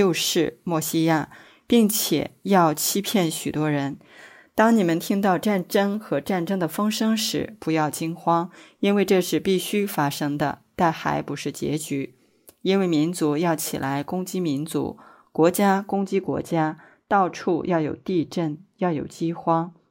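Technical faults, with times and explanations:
15.93–19.91 s: de-emphasis applied wrongly. A treble-cut filter meant to undo pre-emphasis was applied where it didn't belong, so the response slopes smoothly down and 10 kHz sits about 14 dB below 1 kHz. The final four seconds sound dull and muffled.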